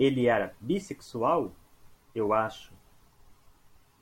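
No technical faults are audible.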